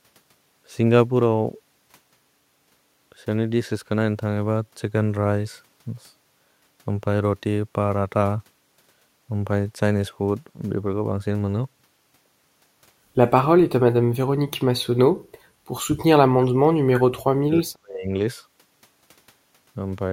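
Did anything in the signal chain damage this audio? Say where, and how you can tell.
Yes, in call processing. The speech is pushed down sharply, by around 40 dB, from 13.98 to 14.51 s and again from 16.24 to 18.19 s. This is speech suppressed in double talk, likely an echo canceller muting the near talker while the far side spoke.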